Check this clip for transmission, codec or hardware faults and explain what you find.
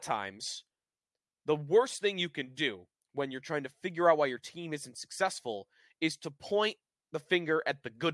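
No faults detected.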